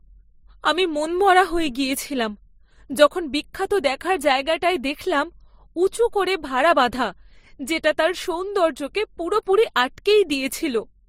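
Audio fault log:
Throughout: transcoding between lossy codecs. Nothing sounds above 16.3 kHz, and two layers of codec smearing can be heard together, which points to a low-rate Opus encode likely re-encoded to MP3 around 47 kbit/s, each pass adding its own artefacts.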